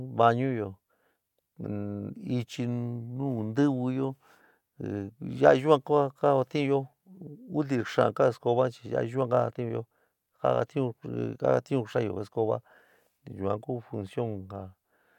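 No technical faults can be heard anywhere in the speech recording; the signal stays steady and intact throughout.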